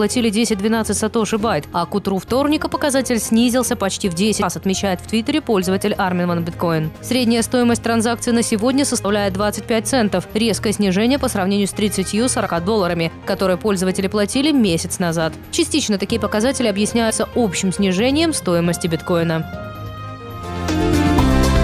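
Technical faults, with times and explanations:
4.41 s, 9.03 s, 12.45 s and 17.09 s, compressed frames skipped: the sound jumps forward by about 200 ms, 70 ms, 50 ms and 100 ms. Each jump is a whole number of frames of about 23.2 ms, so roughly seven, three, two and four frames went missing. Unlike a dropout, there is no silent gap; material is simply absent.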